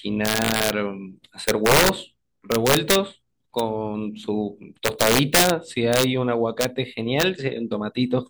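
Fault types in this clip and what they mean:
Integer overflow: 0.26 to 7.2 s, loud speech peaks wrap to the opposite sign rather than limiting, cracking violently, worst at 4.86–5.5 s, about 7 dB over.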